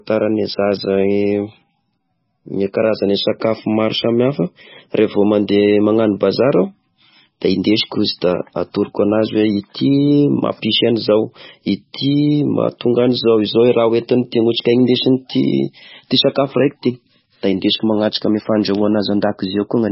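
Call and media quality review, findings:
Watery, swirling speech with smeared consonants and no treble above 5.6 kHz, throughout; likely MP3 compression starved of bits, consistent with roughly 18 kbps, dropping weak frequency lines frame to frame.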